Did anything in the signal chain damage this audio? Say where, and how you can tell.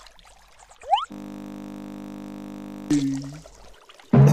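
Yes. A system hang loop at the driver or buffer stage runs from 1.12 to 2.91 s. The system stalled while the hardware kept replaying one 20 ms stretch, producing a steady 50 Hz buzz. A spectrogram shows flat harmonics spaced 50 Hz apart, and the waveform repeats identically.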